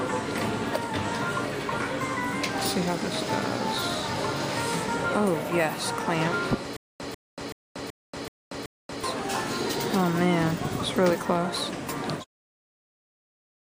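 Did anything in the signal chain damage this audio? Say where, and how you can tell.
Yes, a stutter with silent gaps from 6.77 to 9.04 s. A burst of about 145 ms repeats six times, each followed by about 234 ms of digital silence, so it returns every 379 ms or so. That even rhythm of identical bursts and true silence points to playback or the stream buffer, likely a stall where each retry replayed the last fragment and then ran dry. Packet-loss concealment would instead smear or fade the audio, not repeat it exactly over dead silence.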